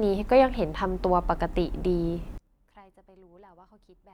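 From 2.38 s to the end, the speech in mono collapses by about 29 dB into a faint residue, likely one channel inverted cancelling the shared centre; the waveform shrinks abruptly.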